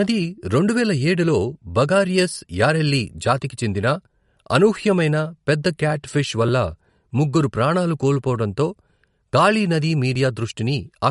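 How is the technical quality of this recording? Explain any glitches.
The speech is dull and watery from start to finish, with nothing above 11.2 kHz, a swirly, chirping texture on s sounds and smeared consonant attacks. The likely cause is MP3 compression at a low bitrate, roughly 50 kbps. Short of bits, the encoder cuts the treble at a fixed frequency and zeroes quiet frequency lines, which flicker on and off between frames and leave the metallic, smeared detail.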